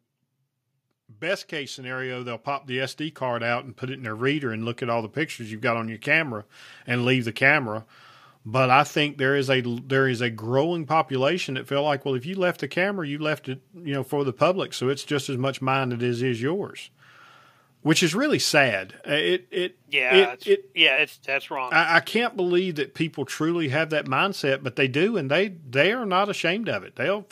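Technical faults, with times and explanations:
0.83–6.6 s, automatic gain rising: the automatic gain control judged the incoming speech too quiet and slowly raised its gain by about 15 dB over nearly six seconds, so the voice and the room background swell upward together rather than the voice alone getting louder.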